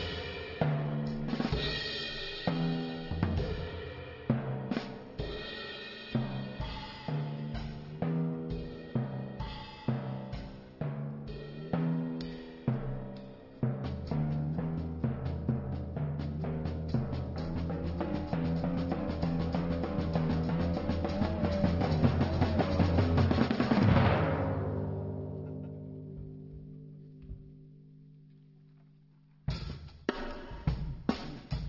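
No technical fault can be heard anywhere in the clip. Nothing in the audio calls for comment on its timing, level or signal path.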